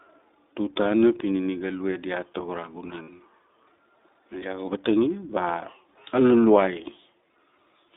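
A speech clip carried through the iLBC codec, with plainly audible coding damage throughout. The audio sits in a telephone band from about 250 Hz to 3.7 kHz, so a spectrogram shows an empty region above 3.7 kHz and a thinned floor below 250 Hz. Each short block of the signal is coded independently, giving a slightly rough, synthetic edge to the voice that fits iLBC's 20 ms frame mode at around 15.2 kbps. At 3.02 to 3.10 s, just after "tago ra", there are lost iLBC frames: about 60 ms of audio is missing, consistent with three dropped 20 ms frames. The decoder fills the hole by repeating the last pitch cycle blended with noise, so the gap sounds like a brief held, buzzy vowel rather than silence. On a spectrogram this appears as a flat, smeared harmonic stripe with no formant movement. In the waveform it is a run of near-identical repeated cycles. Because each frame stands alone, the voice is right again almost at once after 3.10 s.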